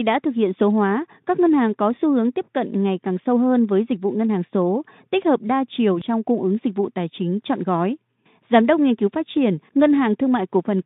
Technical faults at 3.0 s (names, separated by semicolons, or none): none